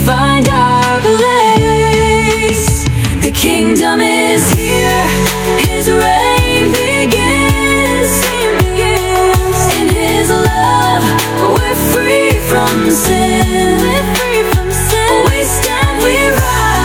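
Gain pumping runs through the whole clip, with the gain swinging by roughly 5 dB. Loud and quiet passages sit unnaturally close together, giving a flattened, squashed dynamic. The likely cause is input gain set far too high for the microphone, with a fast limiter or compressor clamping down on each peak and then releasing.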